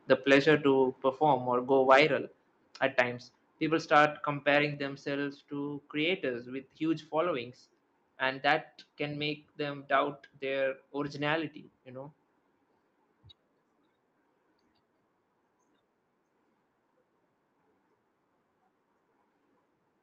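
Microphone overload first appears from 0.32 to 0.55 s, where peaks push about 3 dB past the converter's ceiling and lose their tops, giving loud syllables a harsh crackle. The likely cause is input gain set too high. It recurs at 1.89 to 2.0 s and 3.0 s, each about 4 dB over, and at 3.95 to 4.05 s, about 3 dB over, just before "comparing themselves to creators".

Microphone volume stepped down at 1.02 s, 2.04 s and 4.74 s, with level drops of about 4, 2 and 3 dB. The second comes right after "or go" and the third just before "themselves to creators with". Each step follows a distorted peak, so the call software likely cut the device's input gain after detecting clipping.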